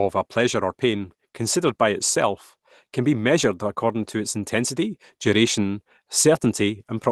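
No technical faults are audible.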